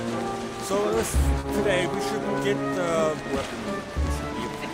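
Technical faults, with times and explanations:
1.39 to 1.45 s, short concealed packet loss: about 40 ms of audio arrived too late for the decoder, so the receiver bridged the gap by extending the preceding sound and then crossfading back into the real signal, leaving a brief smeared blip.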